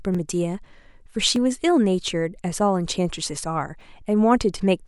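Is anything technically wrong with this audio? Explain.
Yes. From 0.15 to 3.81 s, clicks recur every 1.22 s in the speech. These are likely clock drift buffer slips. Mismatched device clocks drop or repeat small blocks of samples.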